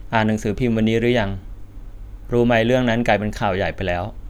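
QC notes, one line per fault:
No faults found on listening; nothing to log.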